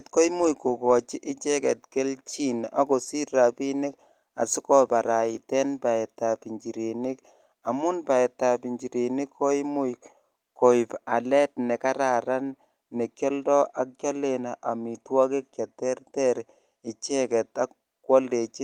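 No technical faults can be heard anywhere in this speech recording. Nothing in it needs a timestamp or any further comment.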